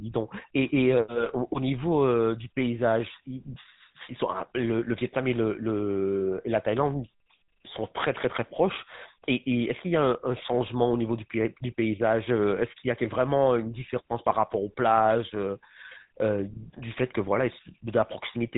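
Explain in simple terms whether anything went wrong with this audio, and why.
Yes, something went wrong. For the whole clip, the speech passes through the GSM full-rate codec, an early mobile-phone encoder. Nothing above 3.8 kHz gets through. Unlike plain muffling, the voice is also plainly buzzy and gravelly, because the codec rebuilds it from coarse, regularly spaced pulses.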